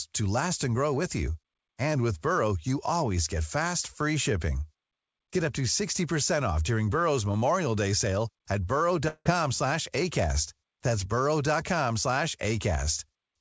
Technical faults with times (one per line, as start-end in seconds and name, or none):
9.08-9.27 long network dropout